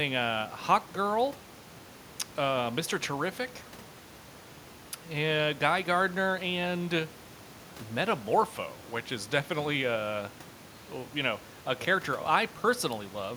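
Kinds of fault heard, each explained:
No technical fault can be heard in this speech recording; the only background is the room's own noise, at about 19 dB and about 30 dB below the speech, which belongs to the recording space rather than to the system.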